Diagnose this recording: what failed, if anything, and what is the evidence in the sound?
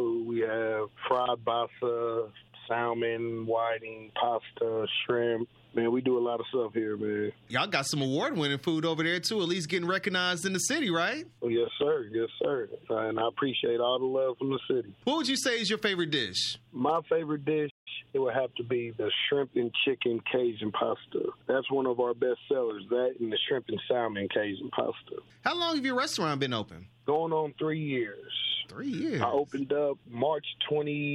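At the playback stage the player likely ran dry of buffered data or had its output thread blocked, causing a playback stall. The sound stops mid-flow at 17.70 s and stays silent for about 0.16 s, resuming at 17.88 s.

The player then clears its accumulated backlog with time-compressed catch-up, splicing out small segments and cross-fading the joins. From 17.88 to 18.20 s the audio runs about 1.5 times fast at unchanged pitch.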